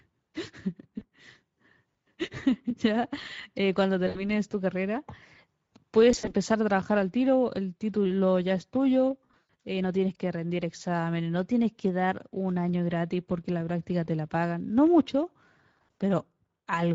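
Right from the start the whole clip carries Speex codec damage, plainly audible: the speech sounds hoarse and grainy, because this CELP coder has few bits left for the excitation, which fits a setting around 17 kbps.

Then there's VoIP packet loss concealed by the speech codec at 0.99 to 1.04 s, 4.07 to 4.30 s, 6.11 to 6.34 s and 9.25 to 9.54 s. The decoder stretches its last pitch and filter into a buzzy tone or coloured noise that fades, and the last one drags on longest, pointing to about 200 ms lost.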